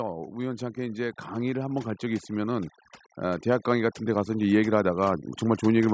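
From start to finish the background drops and breaks up into twinkling specks. This is overdone noise removal, cutting frequency bands that sit near its noise estimate. From 0.36 s to 5.89 s, voice and background swell together by about 11 dB. This is automatic gain rising, as the control slowly lifted a too-quiet input.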